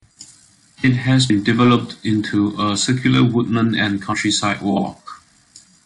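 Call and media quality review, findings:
Hard clipping, 0.85–1.76 s and 2.91–3.25 s: speech overdrives a gain or conversion stage by about 3 dB, flattening peaks into harmonic crackle on peaks.

Damaged data in the compressed stream, 1.29 s and 4.12–4.14 s: corrupted frames break decoder sync, producing brief chirp, click or dropout glitches.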